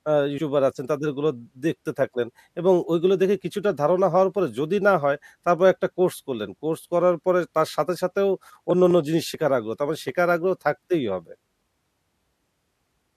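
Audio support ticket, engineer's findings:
Abrupt jump in the speech at 0.38 s (roughly 70 ms missing) and 9.34 s (a smaller skip, around 20 ms). Likely dropped buffer (overrun) at capture. Waveform shows a hard discontinuity without any gap; the spectrogram shows a thin vertical broadband line.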